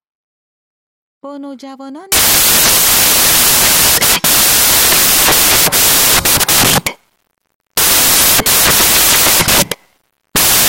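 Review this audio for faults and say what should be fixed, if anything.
From 2.12 s right through to the end of the clip, the speech turns into loud white noise, a classic case of samples built from the wrong bytes. The reader is assembling each sample with its bytes misordered or shifted by one, so the jittery low-order bits land in the high-order position and dominate every value. That's why it's a wall of harsh hiss. To prevent it, make sure the decoder's byte order, sample width and frame alignment match the stream, and resync on frame boundaries so a single dropped byte can't throw everything after it out of step.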